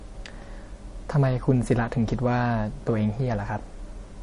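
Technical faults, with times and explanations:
Throughout, MP3 compression: the speech has a plain watery swirl and a hard cutoff at 10.6 kHz, likely a low-bitrate MP3 encode around 40 kbps. A spectrogram shows a flat ceiling and flickering holes.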